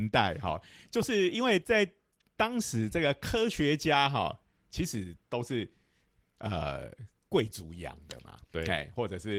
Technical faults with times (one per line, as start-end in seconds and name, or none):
none